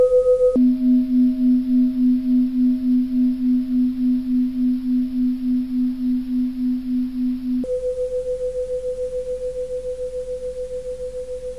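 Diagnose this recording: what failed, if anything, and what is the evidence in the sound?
Stereo read as mono, a channel-layout error at the sample-format conversion stage. From 0.56 s to 7.64 s the sound runs at half speed and sits a full octave (12 semitones) low, with a fainter mirrored copy in the upper half of the spectrum. The interleaved left and right samples were taken as consecutive samples of one channel, so each frame became two, doubling duration, halving pitch, and folding content upward as an image.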